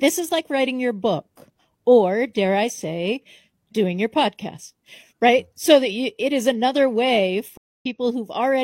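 Right after "it is another way", at about 7.57 s, there's a stream reconnect. The connection dropped and the player restarted its decoder mid-stream, so the sound goes dead for about 0.24 s and picks up again near 7.86 s roughly a fifth of a second further along, leaving a small chunk skipped.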